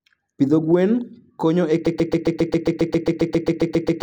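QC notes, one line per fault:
1.87–4.02 s, broken-record loop: after "gwen konyo e" a 135 ms fragment repeats exactly 16 times to the end, likely a stalled stream; spectrogram shows identical tiled blocks.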